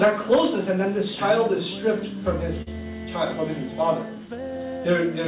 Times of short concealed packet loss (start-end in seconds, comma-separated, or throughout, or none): 2.62-2.68